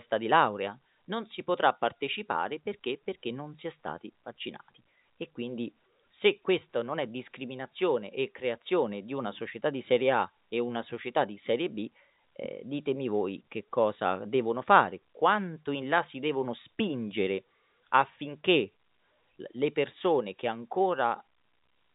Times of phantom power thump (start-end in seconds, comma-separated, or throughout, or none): none